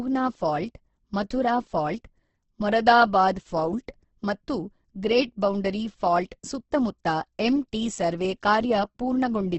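Throughout, the speech carries heavy Opus compression damage, likely from its music mode running at a very low rate, around 12 kbps. Nothing survives above 8.1 kHz, and starved bands get refilled with folded or noise content, so everything sounds grainy and rough.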